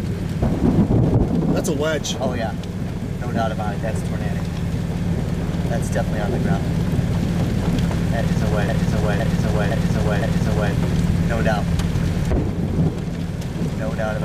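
At 8.69 s the audio locks into a broken-record loop. A chunk of about 0.51 s plays four times back to back, identical each pass, until 10.73 s, so you get roughly two seconds of the same stutter. The likely cause is a player, encoder or stream that stalled and kept resending the last fragment it had buffered. Whatever should have played across that stretch never arrives; it's simply gone.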